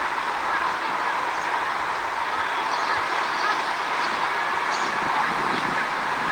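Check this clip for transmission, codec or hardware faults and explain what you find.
Nothing in these sounds points to a transmission, codec or hardware fault. There is nothing to report in the audio path either.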